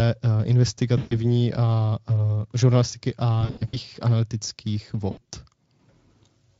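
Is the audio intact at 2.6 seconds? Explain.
Yes, the speech at 2.6 seconds is intact, with no fault at that moment beyond the light, steady coding of the Speex codec it passes through.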